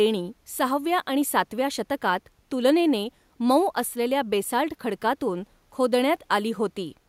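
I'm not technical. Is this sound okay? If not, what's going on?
Yes, this one sounds fine, with nothing going wrong anywhere in it that you need to worry about.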